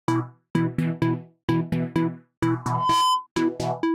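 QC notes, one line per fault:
2.62–3.27 s, loudspeaker feedback squeal: a 1 kHz tone swells over roughly a third of a second to sit about 5 dB above the sound, as the microphone-to-speaker loop exceeds unity gain there. A spectrogram shows one brightening horizontal line; the waveform envelope balloons.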